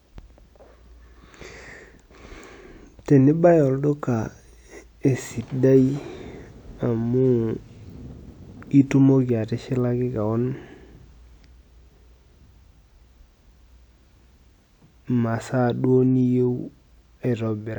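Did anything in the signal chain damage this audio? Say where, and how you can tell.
No, nothing in the signal chain has damaged this speech recording. No stage, from capture through to playback, has left any audible mark on it.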